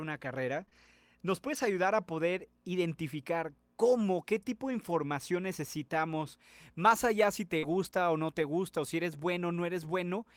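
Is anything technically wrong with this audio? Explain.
Yes, the speech has packet-loss damage.

Lost packet rebuilt from error correction, at 0.53–0.63, 0.73–0.91, 1.53–1.67 s (just before "a poder identificar cómo"), 4.89–4.95 s (between "cómo qué tipo de" and "necesitamos más allá si"), 7.63–7.89 s, and 8.38–8.52 s (between "o no" and "o si eres"). Lost packets were replaced by low-bitrate copies sent in the following packets, so nothing drops out, but those stretches sound rougher and noisier.

Short concealed packet loss, at 0.65–0.69, 0.69–0.73, 7.59–7.65 and 7.91–7.94 s. Audio arrived too late, and the decoder extrapolated from the preceding sound for roughly 20–40 ms each time, leaving brief smears or wobbles.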